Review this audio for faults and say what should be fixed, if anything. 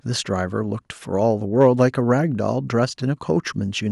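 No faults can be heard anywhere in the speech. Nothing needs to be fixed.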